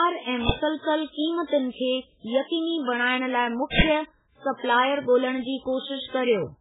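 From the start the speech has a watery, swirly quality with smeared attacks and nothing above 3.8 kHz. That heavy damage is likely MP3 compression, with a bit budget that points to something as low as 8 kbps, so weak frequency lines drop in and out between frames.

At 0.49 s there's a short crack, and from 3.79 to 3.81 s a longer burst of digital noise. Both are an uninitialised buffer: leftover memory played as audio, fitting a 256-sample block first, then a 1024-sample one.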